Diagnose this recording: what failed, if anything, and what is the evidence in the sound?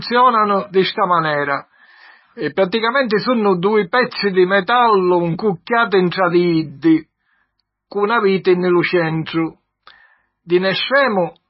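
The speech sounds watery and swirly from start to finish, with sibilants turning into metallic chirps, consonant attacks smeared, and nothing at all above 5.5 kHz, so the top octave is simply gone. The failure sits at the codec stage: this is likely MP3 compression at a very low bitrate, around 16.8 kbps. Starved of bits, the encoder has cut the treble at a fixed point and zeroed weak frequency lines, which flicker on and off between frames and cause the swirl.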